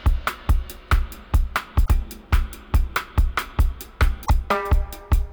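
At 1.84 s, and again at 4.25 s, the audio jumps ahead and the next 50 ms or so comes out damaged. That points to a likely broken MP3 bit reservoir: some frames went missing, so the frames right after each cut reached back for borrowed data and found bytes belonging to other frames. Each damaged stretch spans roughly two frames at about 26 ms apiece, showing up as a chirp, a burst of noise or a brief gap.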